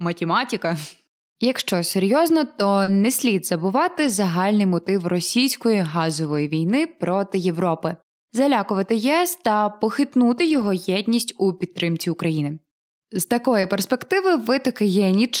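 At 2.83 s, just before "не слід", a short concealed packet loss fills about 40 ms: the decoder extends the preceding sound, giving a brief smear, and the last 20 ms of the gap, from 2.87 to 2.89 s, is a lost packet rebuilt from error correction. The same pair recurs at 13.61 s, with 20 ms concealed and a rebuilt frame at 13.63 to 13.65 s. Further error-correction rebuilds, which sound rougher and noisier than the surrounding audio but leave no gap, occur at 4.03 to 4.09 s (40 ms, between "не слід" and "загальний мотив російської"), at 6.27 to 6.37 s (60 ms, before "війни проти") and at 10.45 to 10.67 s (120 ms, the longest).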